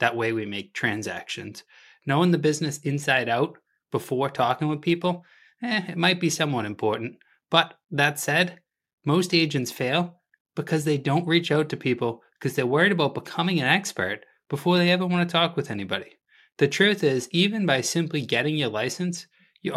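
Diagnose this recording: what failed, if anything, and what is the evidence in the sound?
Nothing stood out on listening to this speech recording that would point to a failure at any stage of the chain.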